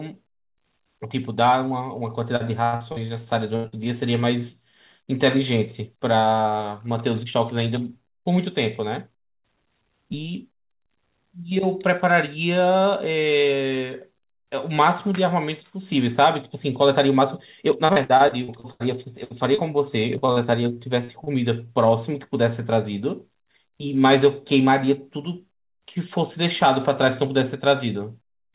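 From 2.36 to 3.88 s the speech turns choppy, with a robotic edge and bits of syllables dropping out. This is repeated packet loss (robotic sound): seven holes open in quick succession, the longest 85 ms, and each is patched by extending the last sound. About 240 ms of real audio is lost, and roughly a fifth of the stretch is filled-in sound rather than the original.

Between 16.82 and 17.77 s the talking briefly sounds hurried, running about 6% fast while the pitch stays put. That is a jitter buffer speed-up. The receiver was holding more audio than it wanted, so it trimmed small pitch-period-sized pieces, around 70 ms in all, to bring the delay back down.

Right after, from 17.86 to 20.39 s, the robotic choppiness returns and lasts longer. Thirteen gaps, the longest 81 ms, remove about 440 ms of audio, and again roughly a fifth of the span is concealment.

At 21.04 to 21.11 s a short smear or wobble replaces about 40 ms of sound. 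This short concealed packet loss was covered by continuing the preceding sound and then blending back into the real audio.

Two short stalls from a late packet follow, at 21.24 to 21.30 s and 21.67 to 21.72 s. In each, a sound is held slightly too long, stretched by 26 ms and 17 ms while the buffer waited for a packet that was late. Nothing is actually missing.

Finally, from 23.43 to 23.94 s, a second jitter buffer speed-up makes the speech rush at about 110%, again dropping around 70 ms of pitch-period pieces.

Throughout the clip the audio has nothing above 4 kHz, which fits a narrowband G.711 A-law call path at 64 kbps.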